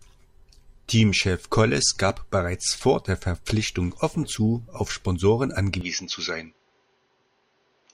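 Speech that turns duller and narrower at 5.81 s and stays so to the end, with nothing above 6.6 kHz, no gap at the change, a faint new background noise and unchanged loudness, likely because the input switched to a poorer device.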